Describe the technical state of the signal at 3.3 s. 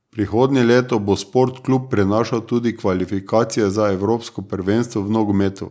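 At 3.3 s the speech is intact, with no fault present, only the normal call microphone processing, which trims the lowest bass and carries nothing above 8 kHz.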